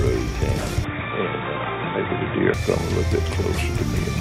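At 0.84 s the sound abruptly goes dull and boxy, with nothing above 3.8 kHz, then opens back up at 2.54 s. There's no gap at either switch, the level holds steady, and a faint new noise floor sits well underneath. Likely an input switched to a poorer device.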